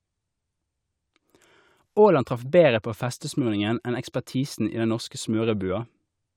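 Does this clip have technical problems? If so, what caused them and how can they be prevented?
No, nothing in this speech recording points to a technical fault, so there is no cause to trace and nothing to prevent.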